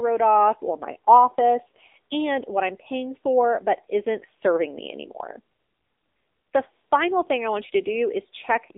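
Throughout the speech the sound is thin, boxed-in and plainly buzzy, with a synthetic edge on every syllable and nothing heard above about 3.8 kHz; the low end fades below roughly 250 Hz. This is the AMR narrowband mobile codec: sampled at 8 kHz, the voice is rebuilt from a vocal-tract model excited by sparse pulses in short 20 ms frames. The plain buzz fits one of AMR-NB's lower modes, near 8 kbps.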